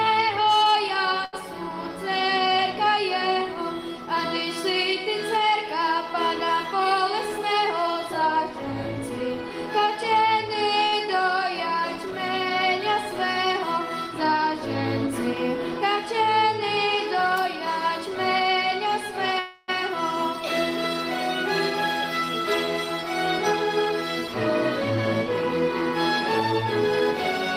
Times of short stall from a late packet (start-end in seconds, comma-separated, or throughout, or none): 1.25-1.35, 10.87-10.95